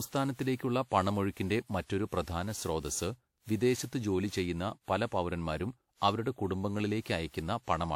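Swirly, smeared and hollow from start to finish, the speech has consonant attacks that blur rather than snap, and the band stops at about 18.9 kHz. The artefacts are heavier than a single encode at a moderate bitrate would leave, which points to generation loss: the audio was likely decoded and re-encoded around seven times, apparently with WMA near 96 kbit/s, each pass quantising on a shifted frame grid so noise accumulates.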